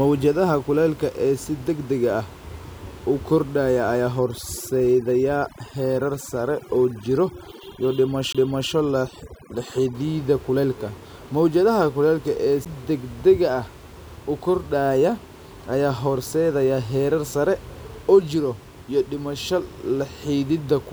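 From 4.19 to 9.95 s, just after "u kordhaya ayaa", the speech shows overdone noise removal. A noise reducer set far too hard pulls down any frequency band it mistakes for noise, so quiet parts of the voice vanish with the background hiss. The gaps between phrases fall to near silence with twinkling, metallic specks. A low-bitrate codec can sound similar, but here the sound is tied to noise level: the effect bites hardest where the voice is quiet and leaves the room noise, normally about 25 dB below the speech, almost gone.

Inside that stretch, from 8.33 to 8.35 s, comes a CD skip. The laser jumps to another turn of the disc's spiral, and the player mutes for roughly 20 ms, then carries on from a different point. It is heard as a tick followed by an abrupt jump in the speech. A second CD skip falls at 12.65 s, between "kulaylka ee" and "degdega ah", with a mute of around 10 ms and the same tick-and-jump. 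A network dropout could also cut the sound, but it would leave a hole or a smeared fill. Here playback resumes cleanly at another place, shifted by whole disc turns.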